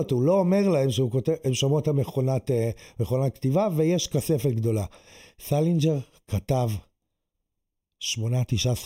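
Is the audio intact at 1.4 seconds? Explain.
No. At 1.4 seconds the speech sounds hollow and phasey, with a fixed dip near 1.5 kHz and further evenly spaced notches above it, as it does throughout the clip. This is channel delay comb filtering: one channel lags by roughly a third of a millisecond, and summing to mono cancels shared content at those frequencies.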